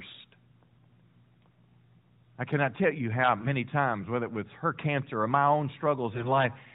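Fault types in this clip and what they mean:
AMR bit errors: Less-protected bits in AMR frames arrived flipped. The sound briefly turns hoarse and gargly after "cannot tell you how" and "cancer or my own".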